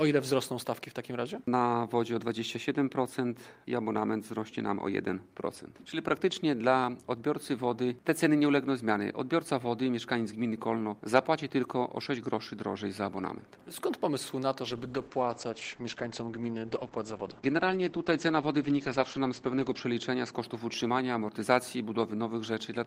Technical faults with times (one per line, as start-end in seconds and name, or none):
14.64-20.39 call bitrate drop